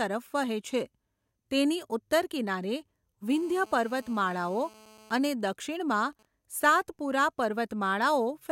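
From 3.32 to 5.17 s, GSM phone buzz: a nearby 2G handset in a call is rectified by the audio circuit, giving a steady, raspy 217 Hz buzz about 26 dB below the speech. From 5.17 to 6.25 s it gives way to GSM signalling bursts, a fainter pattern of even ticks with a longer 217 Hz buzz twice a second, as the handset transmits only intermittently while its user is silent.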